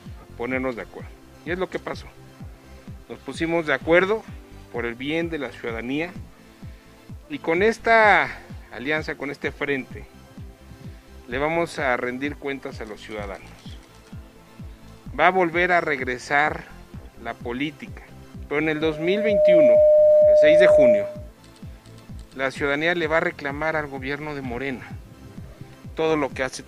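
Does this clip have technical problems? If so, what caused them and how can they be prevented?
Yes. From 18.76 to 21.3 s a microphone picks up its own loudspeaker, and the loop gain passes unity at 606 Hz: loudspeaker feedback squeal. The tone swells over roughly 0.7 s to about 10 dB above the sound. Reducing gain, repositioning the microphone, or notching 606 Hz prevents it.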